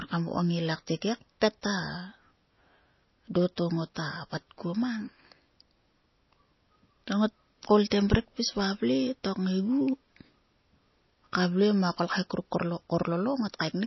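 From start to finish the speech carries plainly audible codec damage, most likely MP3 compression at a very low bitrate, around 24 kbps. Nothing reaches above 5.8 kHz, so s sounds lose their hiss and turn dull. Weak frequency components flicker on and off between frames, giving a watery, swirling texture, and onsets smear. A simple low-pass filter would remove the treble cleanly, without this shifting, chirpy swirl in what remains.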